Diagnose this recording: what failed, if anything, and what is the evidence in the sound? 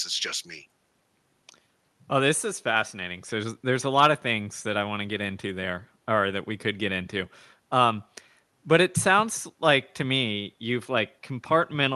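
Nothing in the recording has failed: the speech comes through a call path whose codec limits the band to about 12 kHz, which fits Opus at around 40 kbps, and there are no dropouts, clicks or level problems anywhere in the signal.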